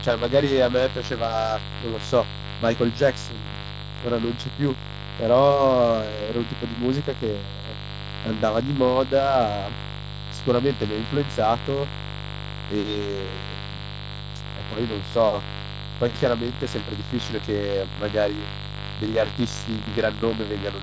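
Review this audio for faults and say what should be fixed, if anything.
Mains buzz runs through the whole clip. Switching spikes from a 50 Hz supply leak in twice per cycle. The result is a raspy buzz only about 10 dB below the speech. To prevent it, shield and ground the cabling properly and keep dimmers and rectifier supplies away from the audio circuit.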